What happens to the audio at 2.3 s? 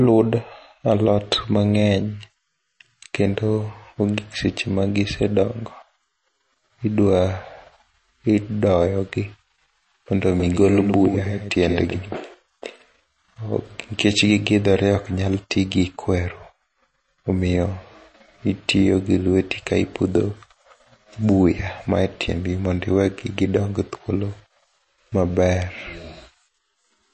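At 2.3 s, as throughout the speech, the likely cause is MP3 compression at a starved bitrate, consistent with around 35 kbps. The encoder cuts everything above 8.3 kHz and drops weak frequency lines frame by frame, so the sound is dull, watery and swirly, with smeared attacks.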